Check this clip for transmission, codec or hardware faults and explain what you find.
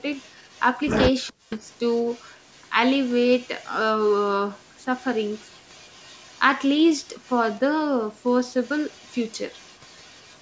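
Two call-path faults stand out: a recurring echo leak and a brief stretch of speech suppressed in double talk.

Echo leak, at 0.16–0.61, 1.27–2.69, 3.07–3.69, 4.07–4.12, 4.95–6.58, 7.23–7.57 and 8.63–10.38 s: a faint delayed copy of the speech trails it by 417 ms, about 30 dB down (about 35 dB at 4.07 s). This is likely a loudspeaker-side echo canceller letting residual pickup return. On a spectrogram, weak harmonic traces repeat the speech pattern shifted right by 417 ms.

Speech suppressed in double talk, 1.28–1.6 s: just as the echo overlaps, the talker's level plunges by about 40 dB for roughly a third of a second. This is likely the canceller clamping down when it cannot separate near speech from echo. The waveform shows a sudden notch, and the spectrogram goes nearly blank there beneath the 8 kHz band limit of the call microphone processing.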